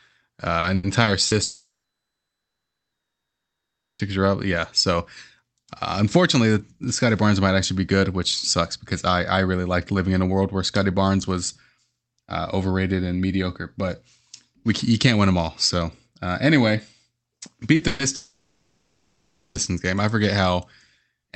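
From 0.59 to 1.34 s the speech breaks up with repeated packet loss, giving a robotic, choppy sound. Four separate gaps, the longest 80 ms, are each patched by extending the preceding sound. Roughly a quarter of that stretch is synthesized fill, which produces the stuttering texture.

At 1.43 s the audio cuts out until 4.02 s, when it resumes at "are up". This is likely a long network dropout. About 2.56 s of speech never arrives. A brief decaying continuation gives way to silence for most of the gap, so the lost material is simply skipped.

At 17.75 s a short concealed packet loss of about 40 ms leaves a brief smear where the decoder extrapolates across the hole. At 17.87 s a burst of packet loss follows, about 120 ms long, running from 17.87 to 18.02 s. The last sound is held and faded rather than dropping to silence, and the speech picks up further on with that portion missing.

A second long network dropout, likely of the same kind, spans 18.15 to 19.58 s, with the audio resuming at "game I forget". 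Here the 1.4 s gap is filled almost entirely by a decaying continuation of the last sound, with only about 80 ms of true silence, so it comes across as a drawn-out, fading drone rather than a clean cut.

Throughout, the Opus call path limits the audio bandwidth to 8 kHz, which accounts for the dull top end.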